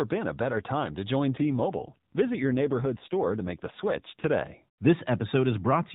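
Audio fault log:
1.38–4.30 s, AMR rate drop: the voice turns buzzier and more synthetic with the same band and no gap, which fits the codec stepping down from 12.2 to 5.9 kbps.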